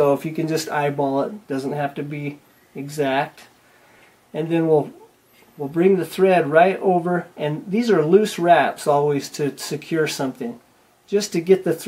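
No technical faults can be heard anywhere in the recording; the signal holds steady throughout without any disturbance or break.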